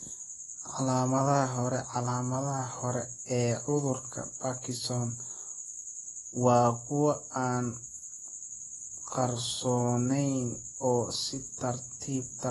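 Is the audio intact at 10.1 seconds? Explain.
No. At 10.1 s, as throughout, the speech carries AAC compression damage, likely from a bitrate near 32 kbps: dull, smeared, cut off above 11.5 kHz, with fizzy sibilants.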